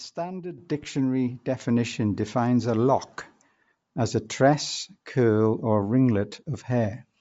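Bluetooth LC3 compression runs throughout the speech, most likely from an LE Audio link at a low rate that fits about 32 kbps with 10 ms frames. Nothing remains above 7.7 kHz, and the upper band sounds grainy and breathy, with plainly audible codec damage.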